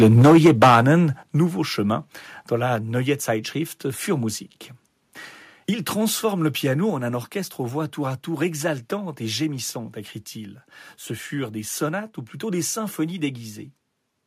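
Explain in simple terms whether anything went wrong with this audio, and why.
Something did go wrong, in two ways.

The first is microphone overload, from the start to 0.92 seconds. The loudest moments of the speech sound harsh and crackly. The likely cause is a microphone set too loud, so the tops of the loudest sounds get cut off.

The second is the microphone volume stepped down. The whole sound suddenly gets quieter at 0.22, 1.23, 2.76 and 6.9 seconds. The drop at 2.76 comes right after "chemin dans". The one at 6.9 falls between "transforme le piano" and "en un orchestre aux". The likely cause is the call software hearing the overload and turning the microphone down.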